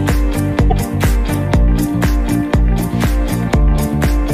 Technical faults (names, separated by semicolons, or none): broken MP3 bit reservoir